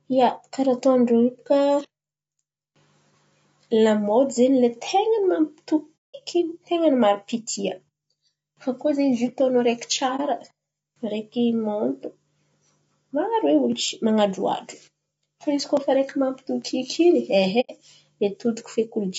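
Throughout, the speech sounds rough and grainy, with noise between harmonics, likely from low-delay AAC compression (AAC-ELD) at a rate that fits roughly 32 kbps. Soft-edged silent holes fade out and back in at 5.97–6.16 s and at 17.60–17.71 s, with a brief dip at 10.16–10.21 s just after "zio atondro areky". This is AAC frame loss with muting, where the decoder zeroed the missing frames.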